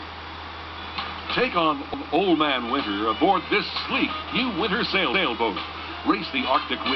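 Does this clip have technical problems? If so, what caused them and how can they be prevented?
Yes, there are overlapping chunks. At 1.94 to 2.14 s and again at 5.14 to 5.34 s, about 200 ms of sound plays twice, giving a brief stutter. Each new 3-second chunk starts before the previous one has finished, so the overlapping piece gets played again instead of being trimmed or crossfaded at the join. To prevent it, make sure chunk boundaries line up exactly, or drop the overlap region before playback.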